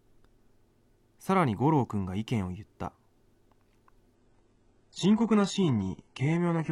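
It's a speech clip, and at 4.15 s the quality drops abruptly with no gap, a classic adaptive stream at a lower bitrate. From there to the end nothing comes through above 11 kHz, with more codec artefacts, which points to a very low-rate HE-AAC-style stream after the connection slowed.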